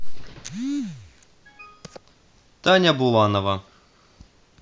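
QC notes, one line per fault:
No technical faults detected.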